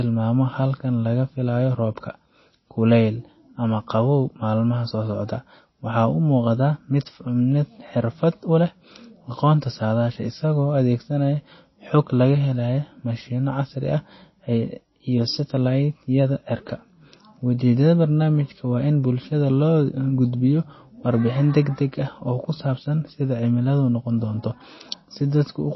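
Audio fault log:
Throughout, MP3 compression: nothing reaches above 5.8 kHz, and the speech has a watery, swirling texture with chirpy s sounds and softened onsets, which points to a bitrate around 24 kbps. Likely cause: the encoder, short of bits, cut the top band and switched weak frequency lines on and off between frames, unlike a plain low-pass filter, which leaves no swirl.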